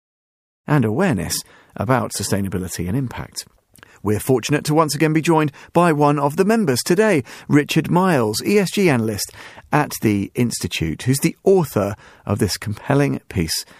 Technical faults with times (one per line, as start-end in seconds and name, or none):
none